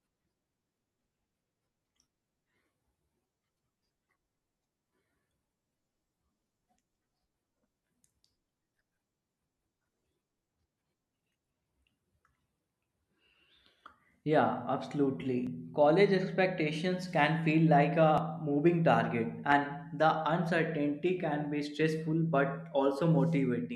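Speech with jumps at 15.47, 18.18 and 19.52 s, each skipping ahead roughly 20 ms, likely a dropped buffer (overrun). Each shows as a waveform step and a thin vertical spectrogram line, with no gap.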